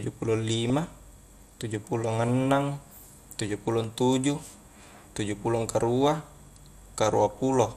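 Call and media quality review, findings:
MP2 compression, whole clip. Dull, band-limited speech with gurgling, granular texture. Likely cause: MPEG Layer II coding starved of bits, upper sub-bands dropping out and flickering, remaining bands coarsely quantised. Damage plainly audible, fits a rate around 80 kbps.

DAB burbling at 0.70 s and 7.30 s. Brief noise blips. Receiver-side reception errors. A low residual bit-error rate, well under one percent, got past error correction. Corrupted samples put short blips of noise in single sub-bands.

Repeated buffer at 3.84 s. Short click. Playout buffer underrun. Device replayed its last buffer twice more, hard join each time. Repeat length fits a 64-sample buffer, about 1.3 ms. Only a few milliseconds of new audio missing.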